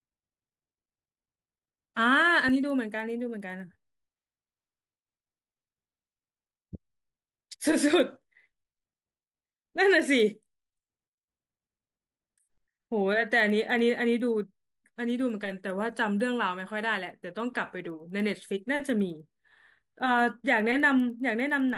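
The sample-rate converter was restarted on every block, so each block of roughly 100 ms in the 24 kHz to 48 kHz conversion was processed without knowledge of its neighbours. At each block edge the filter filled in silence or wrapped-around samples, leaving a small error at every boundary. Throughout the speech this is heard as a steady tick at 10 Hz that rides on the speech and drops away in pauses.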